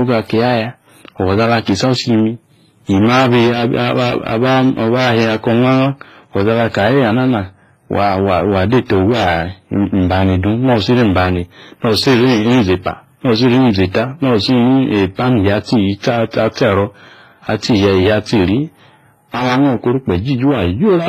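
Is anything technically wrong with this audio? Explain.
Yes. Throughout the speech there is transcoding between lossy codecs: two sets of smeared, warbling artefacts heard together. This likely comes from a low-bitrate WMA encode later re-encoded to HE-AAC, which fits roughly 24 and 20 kbit/s. A spectrogram shows a hard ceiling at 14.9 kHz with blotchy, patchy upper bands.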